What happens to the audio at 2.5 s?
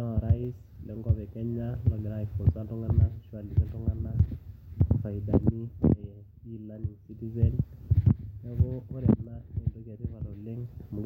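Nothing goes wrong at 2.5 s; the speech there plays through intact, with no dropout, glitch or other audible fault.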